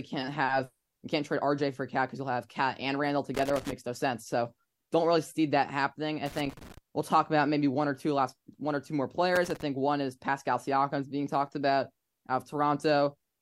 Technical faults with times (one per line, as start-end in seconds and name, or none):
3.34-3.73 loose connector crackle
6.26-6.78 loose connector crackle
9.35-9.62 loose connector crackle